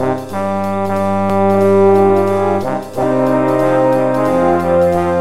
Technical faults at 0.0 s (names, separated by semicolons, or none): none